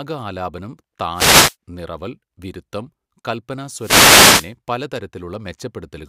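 At 1.13 to 1.56 s and again at 3.75 to 4.53 s, wireless microphone noise hits occur. The radio signal fades, so receiver noise rises as a swish of static over the speech.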